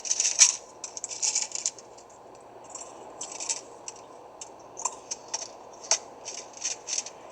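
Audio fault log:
No faults detected anywhere in the recording of everyday sound.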